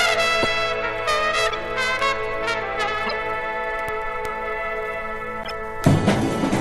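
Four short bursts break into the sound at 0.42 to 0.47 s, 1.46 to 1.55 s, 3.07 to 3.13 s and 5.43 to 5.51 s, each a corrupt frame decoded: damaged compressed data played back as if valid, throwing energy into wrong frequencies for a few frames' length. The first is loudest, around -5 dBFS; the last is quieter. On a spectrogram each shows as a brief smear of misplaced energy; the waveform shows sudden spiky excursions.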